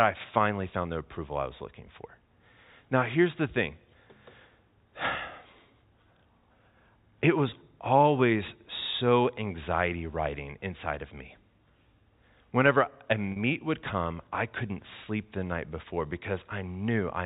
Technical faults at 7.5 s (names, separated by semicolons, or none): packet loss with pitch repetition